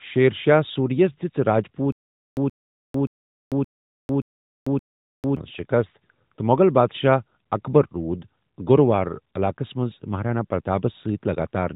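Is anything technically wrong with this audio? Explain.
Yes. A stutter with silent gaps runs from 1.92 to 5.37 s. A 127 ms burst of speech plays, then about 447 ms of dead digital silence follows, repeating six times at a steady 574 ms pace. The likely cause is a stalled player or stream replaying its last buffered fragment on each retry and then running dry, so the speech due in that span is lost. Throughout, the sound carries the narrowband, band-limited character of the AMR mobile codec.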